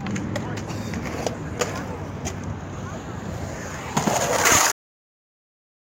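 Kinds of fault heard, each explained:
Cut-off end at 4.72 s: the final stretch of audio was never written out or played back, so the sound halts abruptly mid-event and falls straight into digital silence, with no natural decay, for the remaining 1.1 s of the clip.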